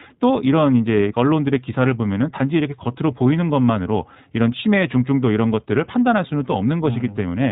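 From start to finish the speech sounds thin and band-limited, with nothing above 4 kHz, and carries a plainly audible rough, slightly synthetic grain. This is the signature of the iLBC codec, a narrowband VoIP coder that rebuilds the excitation of each short frame independently of the one before, which fits 20 ms frames at around 15.2 kbps. The missing high band dulls consonants, and the frame-by-frame excitation coding leaves the buzzy texture.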